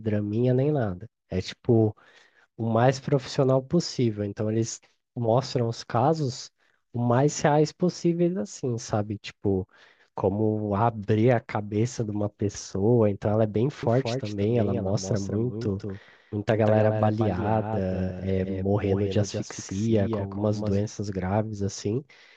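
From 13.83 s to 20.85 s the speech is shadowed by a second copy trailing about a fifth of a second behind, somewhat quieter, full-band and dry, switching on and off abruptly. This doubled audio track likely comes from the signal being captured twice through a slower second path.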